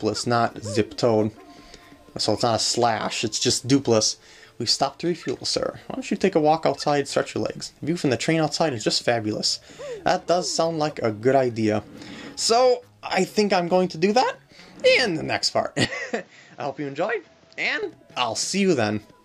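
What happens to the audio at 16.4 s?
From 15.85 to 17.83 s the sound turns duller and about 5 dB quieter, with nothing above 7.6 kHz. The input was likely switched to a poorer device.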